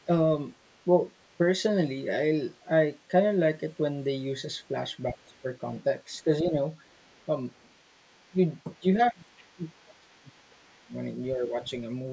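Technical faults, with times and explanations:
0.0–0.04, 0.62–1.36, 5.21–6.23, 6.89–10.92 and 11.5–11.7 s, other side's voice leaking through: a second, faint voice sits under the talker, roughly 40 dB down early on, rising to about 35 dB and then about 25 dB below the speech near the end. The likely cause is loudspeaker playback that the echo canceller did not fully remove from the microphone.
5.11–5.46, 6.24–6.56 and 8.3–11.57 s, speech suppressed in double talk: the talker's voice sinks, by about 15 dB, then about 5 dB, then as much as about 30 dB over roughly 1.5 s in the last stretch. The first and last dips overlap the leaked voice. The likely cause is an echo canceller that could not separate the talker from the echo and turned both down.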